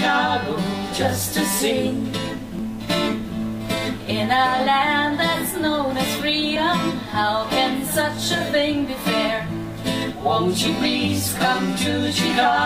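Audio missing between chunks at 2.59, 6.56 and 10.54 s: brief skips about 4 s apart, each dropping roughly 30 ms, likely lost at chunk boundaries.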